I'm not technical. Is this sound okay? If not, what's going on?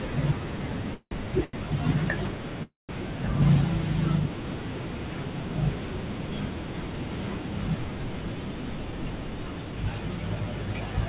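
No. Twice, the call's audio packets were most likely held up in transit, so the receiver ran dry. It stretched the last sound into a fading buzz, then went quiet before resuming: at 0.94 to 1.25 s, and at 2.63 to 2.91 s with a longer silent stretch. These are call audio freezes. They add pauses rather than losing anything.

At 1.44 s one packet arrived late, causing a short stall from a late packet. The sound is held about 0.09 s too long, then carries on where it stopped.

Across the whole clip, the phone-style path removes everything above 4 kHz, giving a narrow, telephone-like tone.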